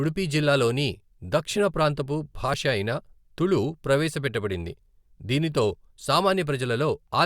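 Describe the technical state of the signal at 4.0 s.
Nothing at 4.0 s points to a technical fault; the speech signal is intact at that moment.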